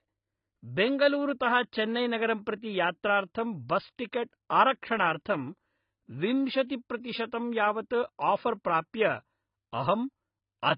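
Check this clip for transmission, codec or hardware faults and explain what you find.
Two codec faults are audible in this speech clip.

Throughout, low-bitrate AAC compression is the likely cause: the dullness and smearing fit AAC-LC at roughly 16 kbps. Too few bits force the encoder to discard high frequencies, leaving nothing above 5.1 kHz, and to quantise the remaining spectrum coarsely, so sibilants turn fizzy and sustained sounds warble.

From 6.67 to 6.70 s, pre-echo appears. A sharp onset lands late in a transform block, and the encoder spreads that block's quantisation noise evenly across it. This puts about 31 ms of hiss ahead of the attack, which then sounds softened and smeared.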